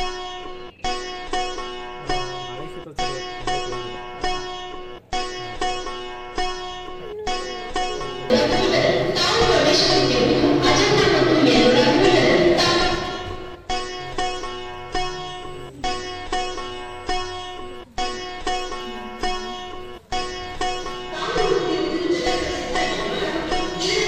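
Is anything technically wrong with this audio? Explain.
Yes. From 15.27 to 17.76 s there is USB whine: a steady 8 kHz tone, about 40 dB below the signal, from the bus's 125-microsecond microframe current draw leaking through power or ground.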